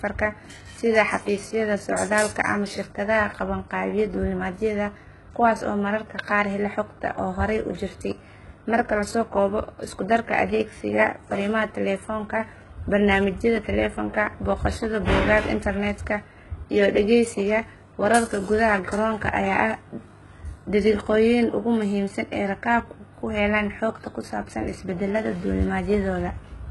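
Right through the speech there's a gritty, metallic treble, and the s sounds come out lispy. Nothing reaches past about 11.5 kHz. That's likely HE-AAC compression at a very low bitrate, around 12 kbps, rebuilding the top end from copied lower bands.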